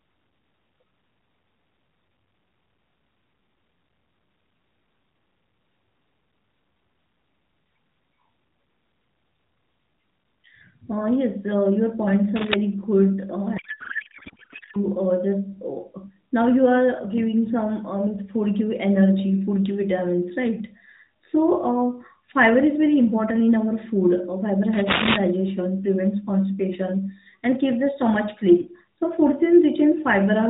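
At 12.36 s there's a short burst of cable scratch noise, just under 0.2 s of dense, ragged crackle sitting right on top of the speech at roughly the same loudness. It comes back at 24.73 s and lasts a bit longer, to about 25.16 s. Both have that uneven rustling texture you get when contact resistance jumps around rapidly, so the likely cause is a worn cable, connector or control being moved.

From 13.58 to 14.77 s there's a codec payload misread. The speech is replaced by garbled noise and warble that barely tracks what was being said, which is what you hear when the decoder unpacks AMR frames using the wrong bit layout. This one sounds like octet-aligned frames being read as bandwidth-efficient, so the fields land in the wrong places even though each frame looks valid. It clears once the two sides agree again. The AMR narrowband coding underneath, probably at 12.2 kbps, has the usual 4 kHz ceiling and only light coding damage.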